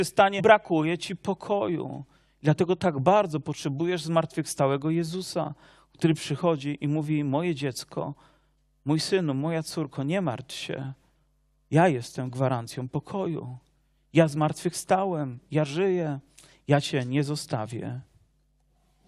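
At 0.38 to 0.40 s, just before "ci pokoju", there is damaged data in the compressed stream. For about 20 ms the encoded bytes are wrong. The decoder cannot read the frames in that stretch properly. It loses its place in the stream and has to hunt for the next valid frame header. What comes out is a brief chirp, squawk, click or short hole. Then clean decoding resumes.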